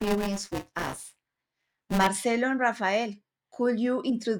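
Buffer tearing, 0 to 2.07 s: ring-buffer writer and reader slipped, so each period carries a stale fifth, heard as a 200 Hz robotic buzz.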